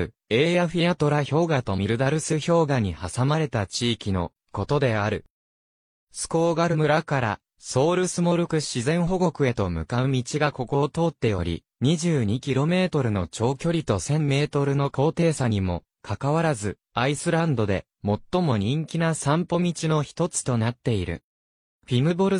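At 1.26 to 1.30 s and again at 6.69 to 6.76 s, damaged data in a compressed stream makes the decoder misread frames and lose sync, giving brief glitches about 44 and 64 ms long.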